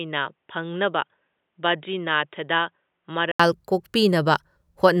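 From 0.00 to 3.40 s the speech sounds dull and boxy, with nothing above 3.8 kHz, a few decibels quieter and over faint new background noise. An input switched to a poorer device is the likely cause. At 3.40 s a gap of about 80 ms precedes fuller sound.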